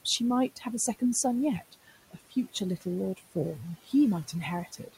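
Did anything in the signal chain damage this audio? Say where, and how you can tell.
Yes. The damage sits in call processing, in the noise suppressor. Noise suppressor artifacts run through the whole clip. The room noise sits about 18 dB under the speech, and the suppressor pulls it down by about 16 dB. It does this band by band, frame by frame. So the background sinks in the gaps and comes back under the speech.

The same stage also cuts speech. The suppressor mistakes quiet parts of the speech for noise and turns them down with the background. This happens at 0.56–0.66 s, with a drop of about 10 dB, and at 1.59–1.93 s, about 13 dB. It happens again at 2.11–2.36 s and at 4.66–4.96 s, each about 17 dB. In each span, roughly 100 to 150 ms sounds swallowed or faint. The last cut clips the very end of the clip.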